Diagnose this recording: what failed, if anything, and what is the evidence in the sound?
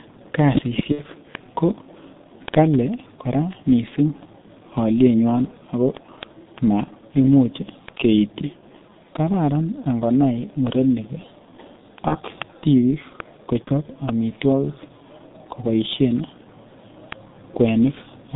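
G.723.1 codec, throughout. This is a codec-stage fault. The speech is confined to roughly 150 Hz to 3.7 kHz, so it sounds muffled and hoarse, and the consonants are smeared. The damage is heavy, which fits a 6.3 kbit/s G.723.1 encode. That coder works in 30 ms frames and updates its model of the voice slowly. It cannot follow fast changes in the sound, and it throws away everything above the telephone band.

Word clock ticks, from 0.13 s to 18.35 s. This is a converter or digital-interface fault. Sharp single-sample ticks of uneven strength recur about every tenth of a second, around two hundred in all. The receiving device is running on its own clock rather than locking to the sender's. The two clocks drift apart by roughly 200 ppm, and each time they slip past one another a sample is dropped or repeated.

VoIP packet loss concealed by the speech codec, at 0.92 to 1.01 s, 12.08 to 12.16 s and 13.65 to 13.70 s. 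This is a network fault, with the speech decoder covering for it. The first gap lasts 60 ms, which fits two lost 30 ms frames. The other two last 30 ms each. In each gap the sound turns into a fading continuation because the decoder extrapolates from its last pitch and filter. The voice stays weak briefly after real data returns, since each frame is rebuilt from the one before.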